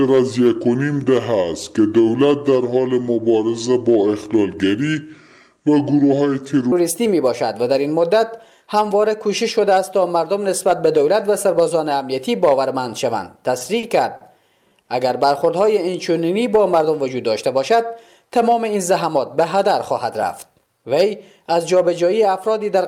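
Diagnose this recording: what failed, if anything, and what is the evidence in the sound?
A playback or editing stage likely ran the opening on the wrong clock. From 0.00 to 6.72 s the section at the wrong speed plays at 0.681 times normal, about seven semitones low.

Late network packets emptied the jitter buffer repeatedly between 13.58 and 14.23 s. The result is repeated stalls (stutter): four gaps, the longest 40 ms, filled by extending the last sound.

One packet arrived late at 14.82 to 14.90 s, a short stall from a late packet. The receiver held the last sound for 60 ms before resuming.

The jitter buffer slowed playback to build reserve from 15.65 to 16.58 s by repeating pitch periods. This jitter buffer slow-down adds 94 ms, running at 91% speed without any pitch change.

An overfull jitter buffer trimmed pitch periods from 18.52 to 19.68 s. This jitter buffer speed-up removes roughly 70 ms and hurries playback to 105% at unchanged pitch.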